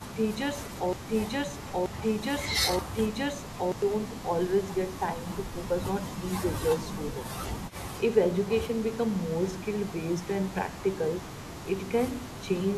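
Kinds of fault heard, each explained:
Broken-record loop: a roughly 0.93 s speech fragment repeats identically three times, already under way at the start, likely from a stalled stream; spectrogram shows matching blocks recurring.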